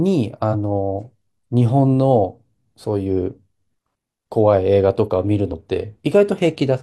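Damaged data in the compressed stream breaks the speech at 0.49–0.55 s, at 3.14 s and at 5.48–5.53 s. Corrupted bytes make the decoder misread frames and lose sync while it hunts for the next valid header, producing brief chirps or blips.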